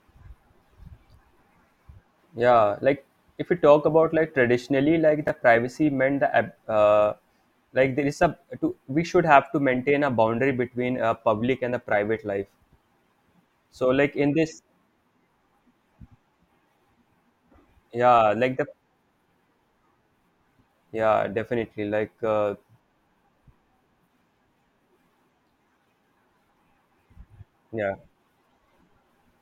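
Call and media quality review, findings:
Chunks out of order, 5.27–5.29 s: one 11.6 ms chunk played a chunk late after "about like traditionally like", giving a brief jumbled moment before "privacy meant".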